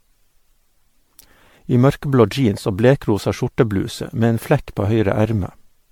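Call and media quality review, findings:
Speech swirly and hollow throughout, consonant attacks smeared, worse than a single encode would leave. Band ends near 19.9 kHz. Likely cause: generation loss, repeated MP3 decode/re-encode, roughly ten passes, consistent with a 96 kbit/s chain. Each pass requantises on a shifted frame grid, so noise and spectral holes accumulate.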